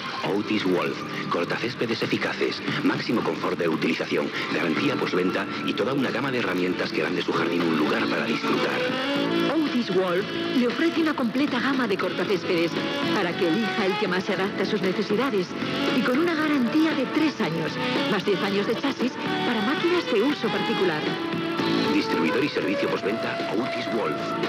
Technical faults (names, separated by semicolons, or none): resampler restarted on every block